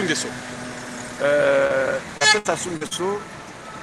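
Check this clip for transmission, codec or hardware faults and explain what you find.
Two transmission faults are audible, both from packets lost on the call's network path.

From 1.67 to 1.72 s there is a short concealed packet loss. About 20 ms of audio never arrived, and the decoder extended the preceding sound to cover it, leaving a brief smear or wobble.

From 2.18 to 2.93 s there is repeated packet loss, giving a robotic sound. Four separate losses, the longest 62 ms, were each patched by continuation, so about a quarter of the stretch sounds choppy and broken.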